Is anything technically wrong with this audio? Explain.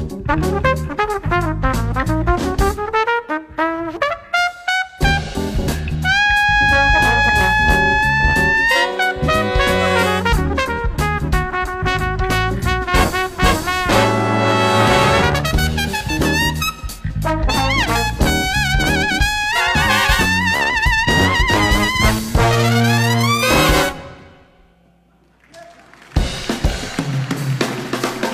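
No, nothing technically wrong can be heard in this audio. It contains no audible fault.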